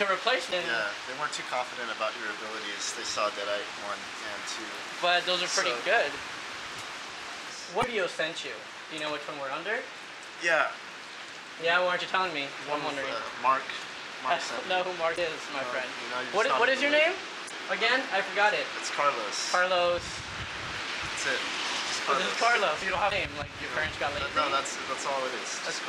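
Five short bursts of damaged data in a compressed stream break up the sound. They start at 0.49, 7.80, 15.14, 17.46 and 23.08 seconds. Each lasts about 44 ms. At these points the compressed bytes are corrupt. The decoder misreads the affected frames and loses its place. It then hunts for the next valid frame header before normal playback resumes. Each event comes across as a brief chirp or blip that cuts into the surrounding sound.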